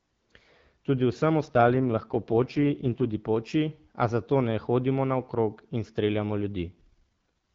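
In this speech clip the voice turns rough and synthetic from 1.45 to 3.14 s, just before "poči a zato ne", and again from 6.66 to 7.29 s after "hodimo naokrog in streljamo". Both are AMR rate drops, consistent with the wideband codec falling from 12.65 to 6.6 kbit/s.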